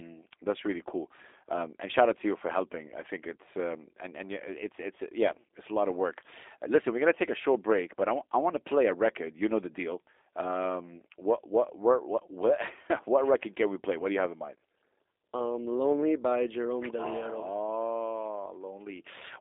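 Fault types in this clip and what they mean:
G.729 codec: speech rebuilt at 8 kbit/s from filter, pitch and pulse parameters, sounding rough and synthetic; spectrogram shows nothing above 3.8 kHz, energy confined to roughly 300 Hz–3.7 kHz.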